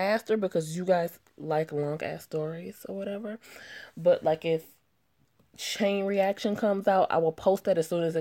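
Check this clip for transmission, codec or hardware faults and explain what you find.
No transmission, codec or hardware faults are audible anywhere in the clip.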